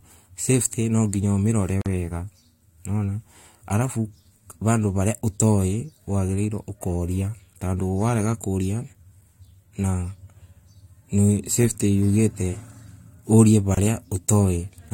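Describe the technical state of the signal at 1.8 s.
At 1.81 s, just after "safety no nginya omirore", the speech drops out for about 45 ms, until 1.86 s. This is a gap at a join of encoded pieces. Two separately encoded segments were butted together with the encoder's start-up delay and end padding still in place, so a short silence opens mid-speech before the sound resumes where it left off. On a waveform it shows as a flat run near zero. A spectrogram shows a narrow empty vertical band whose edges are slightly smeared.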